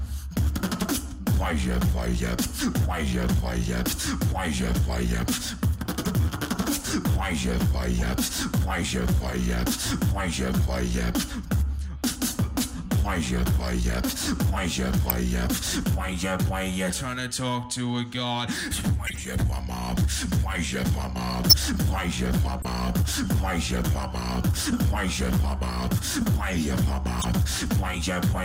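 Corrupt frames decoded as chirps and blips occur at 6.05 s, 7.98–8.05, 11.71–11.73, 15.08–15.11, 19.06–19.20, 21.50–21.59 and 22.62–22.65 s. Damaged bits made the decoder put energy at the wrong frequencies. Each shows as a brief vertical smear on a spectrogram, loudest near 15.1 and 21.5 s.

GSM signalling bursts run from 22.95 to 24.14 s, a galloping dit-dit-dit of short buzzes far below the sound. The circuit rectified nearby phone radio pulses at 217 Hz. This appears as regularly spaced thin vertical lines, then a final corrupt-frame blip at 27.19–27.25 s.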